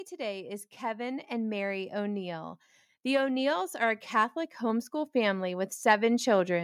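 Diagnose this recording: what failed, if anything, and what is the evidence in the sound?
The speech and the room noise behind it swell together from 0.08 s to 6.59 s, climbing by about 14 dB. This is automatic gain rising in the call processing stage: the automatic gain control judged the input too quiet and kept raising its gain.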